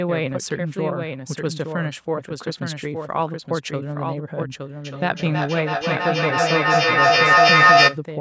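A second copy of the speech runs through the whole recording, most likely because the same signal reaches the mix twice, once directly and once through a slower path, or because an edit left two copies out of step. This doubled audio track trails the original by about a second and sits a few decibels lower. It carries the full band of the call audio, which stops around 8 kHz, with no reverberant tail or room colouring, so it sounds like a clean, slightly quieter replay.

From 4.85 s to 8.05 s, feedback echo between two devices takes hold. A second device in the same room is joined to the call and plays back what the first microphone sent. That microphone captures the playback again, and neither echo canceller removes sound coming from the other device. Each phrase returns roughly every third of a second, thinner and more ringing with every pass. The loop is loud enough, peaking about 10 dB above the speech, that the repeats build up rather than fade.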